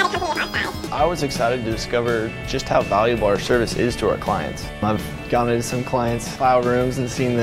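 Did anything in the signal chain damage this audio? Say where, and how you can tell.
Yes. A section at the wrong speed runs from 0.00 to 0.87 s at 1.88 times normal speed, raising pitch by about ten semitones. It was likely caused by an editing or playback clock mismatch. On a spectrogram, partials sit higher and features are time-compressed until an abrupt drop at 0.87 s.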